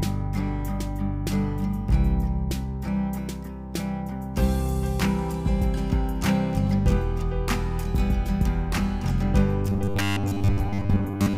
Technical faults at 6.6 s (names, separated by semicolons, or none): none